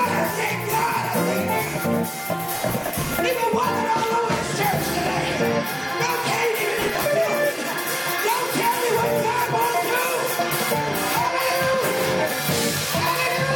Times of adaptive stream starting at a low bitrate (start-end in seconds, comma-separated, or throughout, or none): none